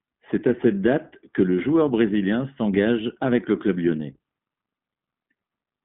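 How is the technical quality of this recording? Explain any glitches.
The technical quality is limited by a low-rate codec. The speech has passed through the iLBC codec for its whole length. It was squeezed into a narrowband channel spanning roughly 150 Hz to 3.6 kHz, with nothing at all above 3.8 kHz, at a rate that fits the 15.2 kbps mode. Each 20 ms frame's excitation is coded on its own, without help from the previous frame. The result sounds muffled and telephone-like, with a plainly audible rough, slightly synthetic edge on the voice.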